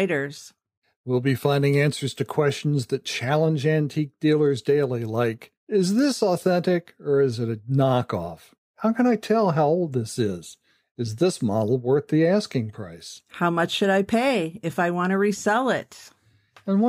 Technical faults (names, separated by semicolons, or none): none